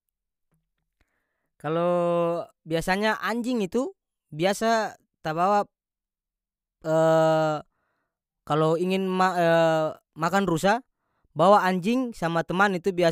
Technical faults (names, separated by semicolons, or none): none